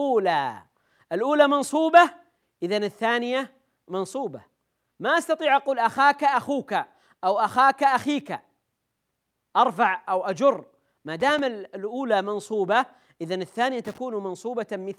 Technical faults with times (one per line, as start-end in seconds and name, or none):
11.20-11.39 loose connector crackle
13.85-13.98 loose connector crackle